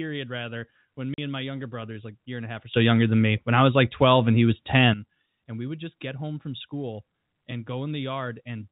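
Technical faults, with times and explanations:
1.14–1.18 s, packet loss filled with silence: after "rather when", a 40 ms hole of dead silence with hard edges. This fits four lost 10 ms packets replaced by silence.
2.74–4.94 s, sudden gain jump: after "and a half or", sound and background noise step up together by about 14 dB and drop back before "and we would just". This is likely a digital gain change applied without a ramp.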